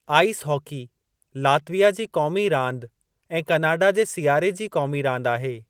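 No faults heard in this speech.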